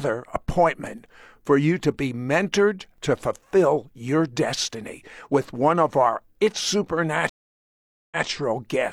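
At 7.29 s the speech cuts out completely and stays silent for about 0.82 s. When it returns at 8.25 s, it picks up roughly 0.14 s earlier than where it broke off, so a short stretch is heard twice. This is a stream reconnect: the connection dropped, the player lost its place, then reconnected and started a new decoder partway through the stream, and the server resent a little audio from before the break.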